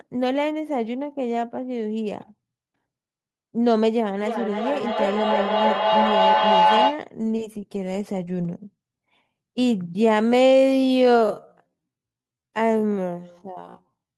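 From 4.21 s to 7.11 s a feedback howl takes over. Two devices sharing a room and a call form a loop, microphone to loudspeaker and back, that adds level on every pass. Instead of dying away like an ordinary echo, the repeats swell and narrow to a single tone around 1 kHz, peaking about 2 dB above the speech. The tone pulses roughly every third of a second, the loop's round-trip delay, until it breaks off.

From 10.23 s to 14.18 s the pace drops abruptly to roughly half speed (0.509×), but the pitch does not fall, which rules out a plain playback slowdown. This is likely a time-stretched section, where software lengthened the audio to fill a duration by repeating short slices. Those repeated slices make the slowed speech drag rather than take on a lower, deeper tone.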